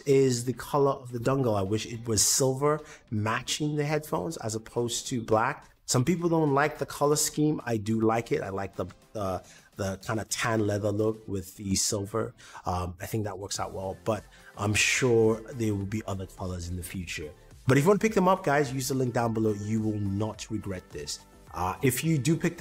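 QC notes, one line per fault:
No faults heard.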